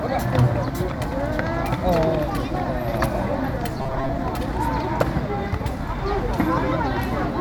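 A stretch of everyday sound from 3.78 to 4.10 s turns into a rigid, metallic buzz pitched at 133 Hz, with the original sound still loosely shaping it. This robotic sound from repeated short buffers is likely caused by audio arriving too seldom, so the playback fills the gaps by looping the last fragment of about 7.5 ms, which imposes that fixed 133 Hz tone. Roughly half of this stretch is repeated material, and the real audio in those gaps is skipped.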